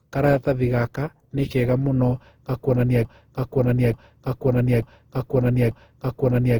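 Speech with generation loss throughout: smeared, swirly and hollow with blurred attacks, likely from about seven successive Opus encodes at 48 kbit/s on shifting frame grids. From 3.05 s to the end, a broken-record loop repeats one 0.89 s fragment four times back to back while the following audio is lost, consistent with a stalled stream or player resending its last buffer.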